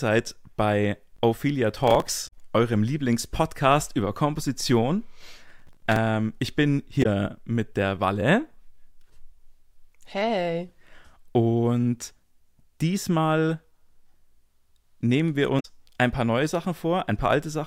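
At 1.88 to 2.09 s and again at 5.48 to 5.96 s, just before "ich bin", processor overload crackle breaks into the speech. Missed deadlines on buffers of around 3 ms repeat stale audio, roughly ten and then about twenty times. The result is a burst of crackle or gritty tearing, seen as dense vertical streaks in the spectrogram. Damaged data in a compressed stream makes the decoder lose frame sync at 2.27 to 2.33 s, at 7.02 to 7.06 s between "ich bin" and "mit der", and at 15.59 to 15.65 s after "nehmen wir". Each is a brief glitch, showing as a smeared block and a waveform discontinuity.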